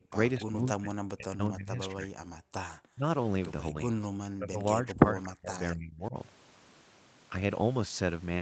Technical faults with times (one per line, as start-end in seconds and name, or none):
0.00-0.14 speech suppressed in double talk
0.39-2.16 speech suppressed in double talk
2.44-2.54 background gated by the echo canceller
2.89-3.05 speech suppressed in double talk
3.72-6.15 speech suppressed in double talk
5.23-5.29 echo leak